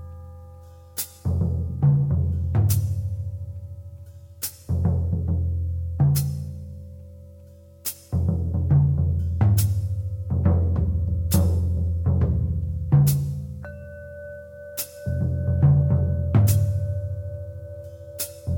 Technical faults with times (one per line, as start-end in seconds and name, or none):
none